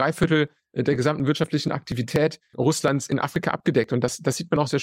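From 0.23 s to 4.56 s the speech carries periodic USB or driver dropouts: every 0.24 s something blocks the audio path and around 10 ms is skipped outright. The even spacing of about twenty ticks, heard only under signal, separates it from random clicks.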